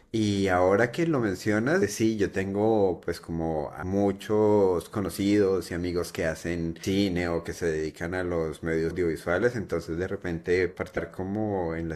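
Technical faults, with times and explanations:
1.81, 3.82, 6.83, 8.90 and 10.96 s: damaged data in a compressed stream. Each is a brief chirp or blip in the speech, lasting under 20 ms and recurring roughly every two to three seconds. Corrupted bytes in the encoded stream make the decoder misread those frames. It then loses sync and hunts for the next valid frame header before normal decoding resumes.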